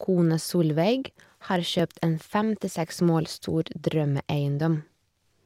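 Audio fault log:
1.80 s and 3.39 s, dropped buffer (overrun): the likely cause is the program failing to read its input in time, so the hardware overwrote a short block of samples before they were collected. That block is lost and the sound on either side is spliced straight together, with no gap of silence. The speech jumps forward by a millisecond or two at the first point and a few milliseconds at the second, and each join is heard as a jump in the sound.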